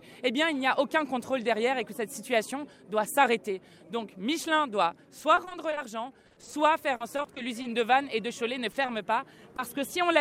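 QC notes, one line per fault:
0.59–1.31 s, GSM signalling bursts: a galloping dit-dit-dit of short buzzes at a 217 Hz rate, about 30 dB below the main sound. A nearby 2G phone's radio bursts are rectified by the audio circuitry. On a spectrogram they appear as evenly spaced vertical striations with harmonics stacked at multiples of 217 Hz; the waveform shows regular small spiky clusters.
5.19–5.79 s, 6.27–6.54 s, 6.96–7.66 s, repeated packet loss (robotic sound): choppy stretches where holes of up to 40 ms recur in quick succession. Each hole is patched by extending the preceding sound, and the next hole follows before the audio recovers. The patching covers about 24%, 47% and 17% of the three spans. On a spectrogram these show as smeared, repeated harmonic blocks with abrupt seams. The waveform has periodic copied segments.
8.72–8.76 s, 8.82–8.90 s, 9.56–9.60 s, short concealed packet loss: brief smears or wobbles where 20 to 40 ms never arrived in time. 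The decoder continued the last sound and blended back. A spectrogram shows narrow flattened or frozen slices; the waveform shows short stretches of repetition.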